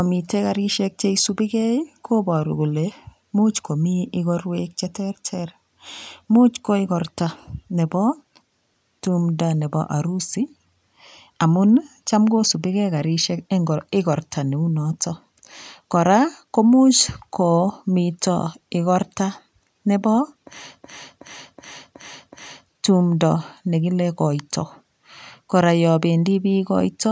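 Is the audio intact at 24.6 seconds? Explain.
Yes, the speech is intact at 24.6 seconds, with nothing there beyond the ordinary call microphone processing that limits the sound to below 8 kHz and trims the lowest bass.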